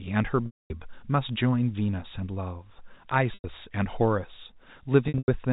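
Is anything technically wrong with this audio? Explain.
Yes. Packet loss with pitch repetition occurs at 0.46–0.70 s, 3.34–3.44 s and 5.08–5.28 s. The receiver loops the last pitch period, fading it over about 50 ms. It sounds buzzy and held, then silent in the 240 ms gap. The final loss is scattered, with runs up to 100 ms.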